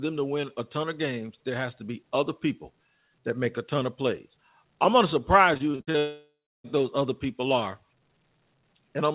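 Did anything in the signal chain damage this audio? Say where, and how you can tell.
Yes. From 5.54 to 5.96 s the speech turns choppy and robotic, broken by six short holes, the longest 58 ms. This is repeated packet loss in the network stage of a call path that carries nothing above 4 kHz. The receiver patched each gap by repeating the last sound, and those patches fill about 43% of the stretch.

Right after, from 5.98 to 6.66 s, the sound smears into a fading buzz and then falls to about 0.3 s of silence. The speech returns with that section gone. This points to a likely long network dropout, where concealment stretched the last audio and then gave up.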